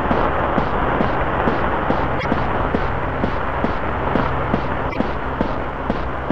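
At 2.16 to 2.25 s and again at 4.87 to 4.97 s, about a tenth of a second each, the audio briefly breaks up, the mark of damaged data in a compressed stream. Corrupted bytes there throw the decoder out of step, so it misreads frames until it finds a clean frame header again.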